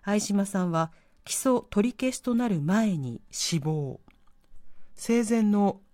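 A speech recording that, from 3.4 s to the end, turns slightly slow and low, running at about 0.92 times normal speed and dropping about 1.5 semitones. This is a wrong sample rate fault, which fits 48 kHz audio played back at 44.1 kHz without conversion.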